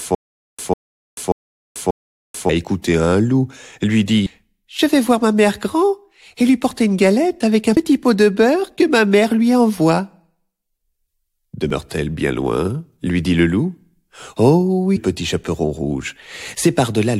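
From the very first instant until 2.49 s the sound is caught in a stutter with silent gaps: a 148 ms fragment repeats four times, each followed by about 438 ms of digital silence, giving an even 586 ms cycle. On a waveform this shows as identical blocks separated by flat silent stretches, most likely from a stalled player or stream replaying its last fragment between retries. Later, brief glitches at 4.25 s, 7.76 s, 11.71 s and 14.96 s point to damaged data in a compressed stream, where the decoder misreads corrupted frames and resyncs at the next header.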